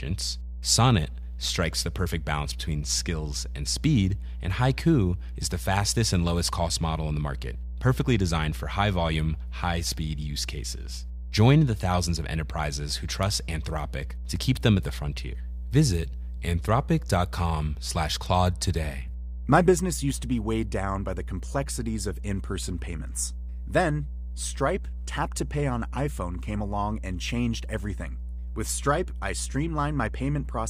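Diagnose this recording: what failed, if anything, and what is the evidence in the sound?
Mains hum sits under the speech for the whole recording, a steady 60 Hz tone roughly 10 dB below the voice, which points to the analogue wiring, likely a ground loop or nearby transformer. Unlike broadband rumble, it holds one fixed pitch that never follows the speech.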